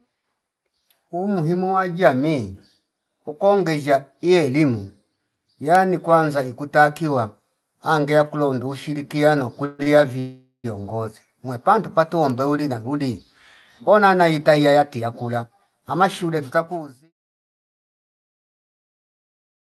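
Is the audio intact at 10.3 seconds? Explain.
No. Around 10.19 to 10.66 s, a call audio freeze: delayed packets likely drained the jitter buffer, so the receiver stretched the last speech into a fading buzz or hiss, briefly going silent, then resumed with nothing lost.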